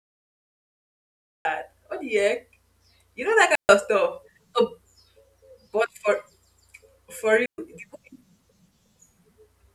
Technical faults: cut-off start; digital wireless dropout

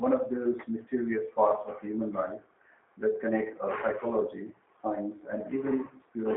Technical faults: G.729 codec

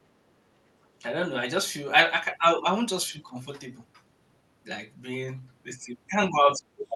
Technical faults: background gated by the echo canceller; speech suppressed in double talk; other side's voice leaking through

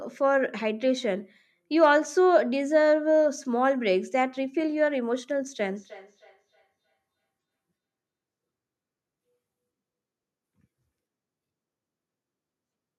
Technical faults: feedback echo between two devices

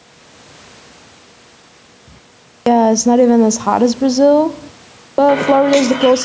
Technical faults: gain pumping; clipped start after a pause

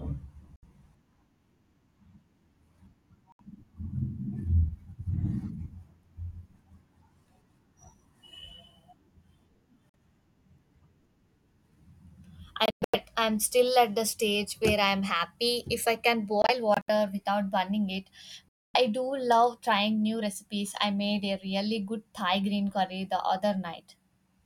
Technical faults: Bluetooth dropout

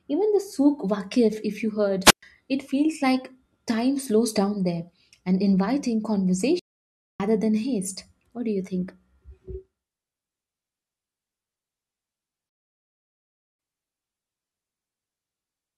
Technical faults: wireless microphone squelch dropout; playback stall

